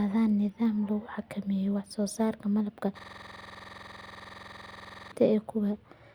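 At 2.99 s the speech locks into a system hang loop that runs until 5.12 s. The machine or its driver stalled while the audio hardware kept replaying its ring buffer, so one 46.4 ms slice, which fits a 2048-sample buffer, repeats identically about 46 times. At 21.5 repeats per second it sounds like a harsh, rigid rattle on the edge of a buzz. Unlike a dropout or packet-loss concealment, nothing fades or varies: every cycle is an exact copy.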